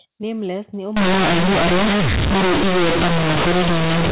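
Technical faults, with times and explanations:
0.97 s to the end, companded audio read as linear: sudden, very loud buzzing distortion, with heavy noise filling the pauses. The A-law telephone bytes are played as plain linear 8-bit samples without expansion, so each sign change swings across half the range and quiet passages become as loud as loud ones.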